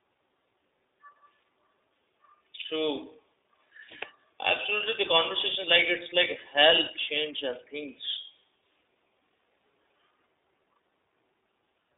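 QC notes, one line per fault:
Throughout, iLBC codec: the speech is squeezed into a narrow phone band of about 300 Hz to 3.7 kHz, so it sounds thin, and each 30 ms frame's excitation is coded on its own, which gives that plainly rough, slightly synthetic edge. This fits iLBC's 30 ms mode at around 13 kbps.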